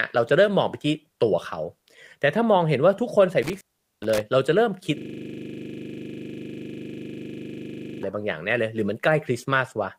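From 3.43 to 4.20 s the speech drops out through an intermittent contact. A loose plug or cable opens for about 0.41 s, with crackle at both edges and faint hiss underneath. Unlike a digital dropout, there's no clean silence.

From 4.98 to 8.03 s a system hang loop sets in. The driver has frozen while the hardware keeps replaying one 40 ms buffer. It repeats exactly at 25 Hz, giving a rigid, steady buzz at that rate rather than the irregular repeats of network jitter.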